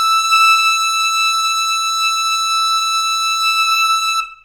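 Music, with no technical fault to be heard anywhere in it. There is nothing that calls for a time or a cause.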